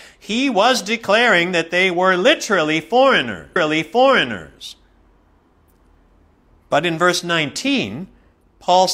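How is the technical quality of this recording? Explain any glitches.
The recording has one glitch. A stream segment repeats at 3.52 s: the player fetched or queued the same segment twice, so about 1.02 s of speech replays after a small blip at the jump back.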